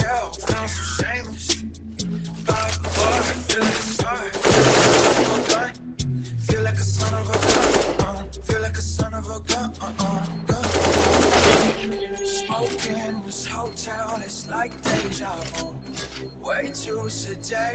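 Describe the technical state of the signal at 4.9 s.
At 4.9 s, as throughout the clip, a speech noise suppressor is pulling down sustained tones and decaying tails while letting attacks through, so the sound pumps and thins by around 10 dB. Unlike a compressor, the gain follows how steady the sound is, not how loud.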